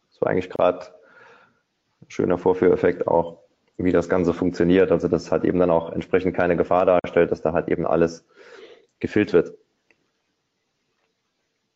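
Brief dropouts to silence with smeared edges cut the sound at 0.56 s (about 27 ms) and 6.99 s (46 ms). These are gaps at joins of encoded pieces, where leftover encoder delay and end padding weren't trimmed.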